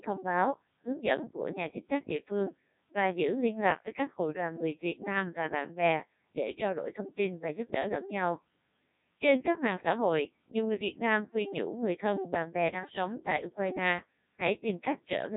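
Speech runs through a Codec 2 vocoder for all of it, with heavy damage. It sounds robotic and buzzy and has nothing above 3.8 kHz, which fits a 1.6 kbit/s mode. Unlike a band-limited telephone line, the waveform itself is gone, resynthesised from pitch and envelope.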